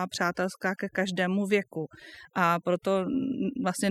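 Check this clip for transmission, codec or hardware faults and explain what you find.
The speech shows overdone noise removal across the whole clip. A noise reduction stage set far too aggressively is cutting individual frequency bands down or out whenever their level sits near its noise estimate, so quiet parts of the speech are stripped away with the noise. The pauses drop to near silence dotted with twinkling, chirpy specks. On a spectrogram the background shows as scattered isolated dots on a dark floor, and the speech harmonics look patchy and eaten away at their edges.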